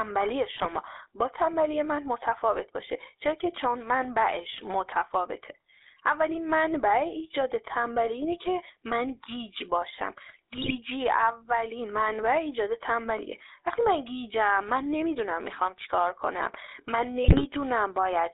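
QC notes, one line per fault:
Throughout, GSM full-rate codec: the speech has that buzzy, gravelly edge from the vocal-tract model being driven by a sparse, regularly spaced pulse excitation, and it's plainly audible. Band sits roughly 300 Hz to 3.7 kHz, and the texture fits a 13 kbps stream.
0.56–0.68 s, 10.52–10.77 s, 17.24–17.47 s, GSM bit errors: short bursts of squawking, pops and gargle where corrupted filter, pitch or gain values hit the decoder, twisting the spectrum and jolting the level for a few frames. The middle burst is the longest.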